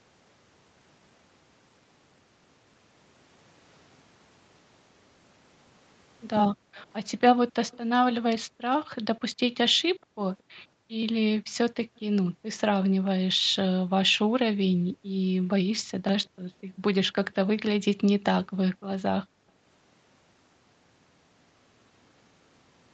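From 6.51 to 6.76 s the room background dips sharply, falling by about 40 dB for roughly 0.3 s in total: background gated by the echo canceller, which clamped the microphone while the far-end loudspeaker played. From 6.76 to 7.78 s a faint delayed copy of the speech trails 224 ms behind, about 30 dB down, likely an echo leak where the canceller let loudspeaker sound back into the microphone. Between 8.43 and 16.81 s the background keeps ducking, by up to about 40 dB, for around two seconds in total, as the canceller gates it again. A quieter echo, about 35 dB below the speech and again 224 ms late, returns from 10.39 to 12.6 s and from 16.24 to 17.36 s, likely the same leak. At 19.25 to 19.49 s the background drops out once more, by about 40 dB for roughly a fifth of a second. Throughout, the call's microphone processing limits the sound to nothing above 8 kHz.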